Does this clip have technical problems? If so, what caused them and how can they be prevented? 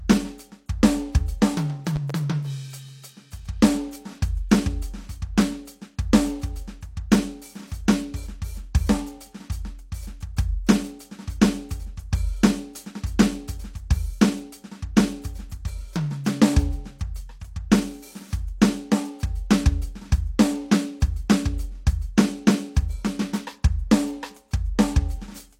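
Yes. A sudden voltage pulse, likely from a plug, switch, static or a driver glitch, caused a loud pop: two sharp hits between 1.96 and 2.12 s, about 5 dB above the music. To prevent this, mute the signal chain before plugging or switching, ground equipment against static, and keep audio drivers stable.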